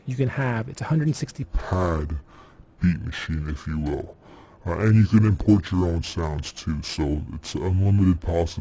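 From 1.43 s to the end at 8.60 s, the sound drops about 7 semitones and slows to two-thirds speed, heavy and dragging. This is a wrong sample rate fault, where playback runs slower than recording with no conversion, which fits audio recorded at 24 kHz being played at 16 kHz.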